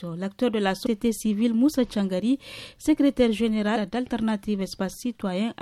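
The audio has compressed frames skipped at 0.85 s and 3.75 s. Each is a brief smeared blip where the sound jumps ahead, roughly 150 ms and 70 ms respectively. That fits a few whole frames of about 26 ms each missing or being rejected by the decoder.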